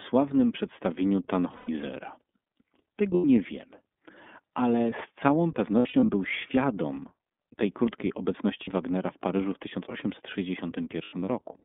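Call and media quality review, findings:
Narrowband, slightly rough and synthetic speech throughout, nothing above about 3.6 kHz and thin below about 200 Hz, with plainly audible coding damage. Component: iLBC codec. Mechanism: each 30 ms frame's excitation coded independently on a telephone-band line; the texture fits the 13.33 kbps mode.

Short held, buzzy-breathy vowel sounds replacing speech, voice snapping back clean right after. 1.55–1.69 s (120 ms). 3.14–3.25 s (90 ms). 5.79–6.10 s after "ale z całą", before "był świadom tej krótkiej": 180 ms scattered over 300 ms, longest run around 70 ms. 8.64 s after "był świadom tej krótkiej" (30 ms). 11.03–11.28 s: 120 ms over 240 ms, longest about 100 ms. Component: lost iLBC frames. Mechanism: decoder repeats last pitch cycle plus noise; standalone frames allow instant recovery.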